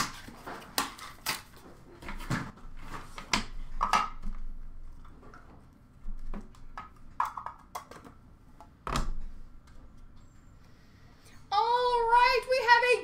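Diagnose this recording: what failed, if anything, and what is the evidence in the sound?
From 2.50 to 2.63 s, the sound abruptly drops by about 6 dB and then returns at full level, a gap of roughly 130 ms. The change is a clean step, not a fade. This is one channel dropping out, most likely at the analogue wiring stage, such as a loose connector or intermittent cable on one side. With one channel gone, the mono sum carries only half of the shared material, giving the 6 dB fall. Anything present only in the lost channel vanishes for that span.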